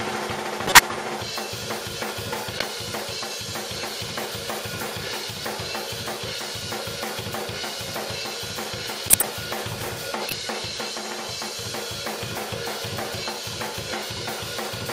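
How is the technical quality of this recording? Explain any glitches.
Four short glitches break into the recording, all corrupt frames decoded: at 0.66 to 0.79 s, 2.58 to 2.63 s, 9.08 to 9.24 s and 10.29 to 10.39 s. Damaged bits in the compressed stream were decoded as if valid, so misread gains and codes spray energy into the wrong frequencies, giving loud chirps, squeaks, blips or bursts of noise. Most peak around -5 dBFS, and the 2.58 s burst is somewhat quieter. Unlike a dropout or concealed packet loss, the sound turns into foreign noise.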